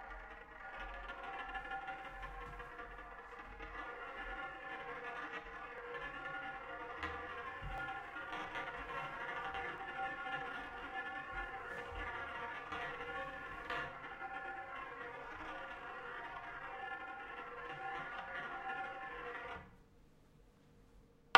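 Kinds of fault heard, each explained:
Periodic USB or driver dropouts: a handful of evenly spaced ticks, about five of them, arriving every 2.0 s between roughly 5.78 and 13.77 s and audible only where the sound carries signal. Each tick marks a tiny piece of audio, well under a millisecond, being skipped outright rather than filled with silence. That regular spacing points to a background task stalling the USB bus or audio driver on a fixed cycle.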